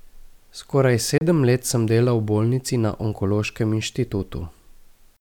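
At 1.18 s the speech cuts out, returning at 1.22 s, just before "let sem delal v". The gap is short. About 29 ms of sound is missing, which fits two lost packets. When the speech returns, it has moved on in time. Nothing was paused or held back. This is likely a Bluetooth dropout, where packets failed to reach the headphones in time and were discarded.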